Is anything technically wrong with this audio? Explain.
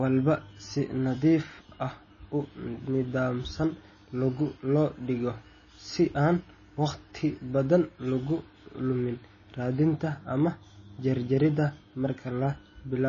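Yes, the speech has been squeezed hard by what is likely MP3 compression, and it runs the whole way through. There's nothing above 7 kHz, so the encoder has chopped the treble off to save bits, and the damage is plainly audible. That fits a very low bitrate, somewhere around 24 kbps. At that rate weak frequency lines flicker on and off between frames, giving a watery, swirly texture, and the s sounds come out chirpy and smeared rather than crisp.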